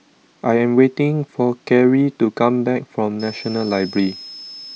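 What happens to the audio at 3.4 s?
A thin, high whistle near 5 kHz, wandering between about 5.1 and 5.3 kHz, sits roughly 20 dB under the speech from 3.2 s to the end. It is switching supply whistle: a power converter cycling at an audible rate, its pitch shifting as the load varies.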